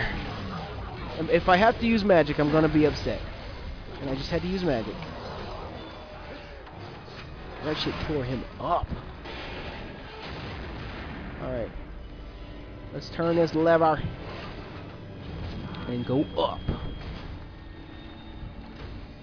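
No technical faults can be heard in this audio. Nothing in the signal breaks, drops out or shifts at any point along the way.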